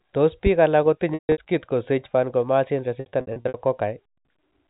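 Packet loss with pitch repetition at 1.14–1.38 s and 3.0–3.54 s. The receiver bridged the missing packets by looping the last pitch period. The first gap, with a 150 ms run, fades toward silence. The second's shorter, scattered losses give brief buzzy holds over the narrowband G.711 telephone sound.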